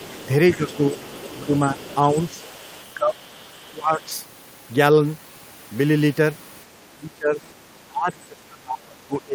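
The other side's voice leaking through runs from 0.0 to 4.03 s: a second voice sits faintly under the speech, roughly 20 dB down, likely because the far end is playing from a loudspeaker into the microphone and the echo canceller left part of it behind. It hovers just behind the main voice for those first four seconds.

Speech suppressed in double talk follows in six places: 0.55 to 1.77 s, 2.28 to 2.32 s, 2.95 to 3.17 s, 3.7 to 4.09 s, 6.9 to 7.42 s, and 7.88 s to the end. Both sides were likely talking at once, and the canceller, unable to separate its own talker from the echo, turned the whole signal down. The voice dips by around 10 dB at its mildest and roughly 25 dB at its deepest.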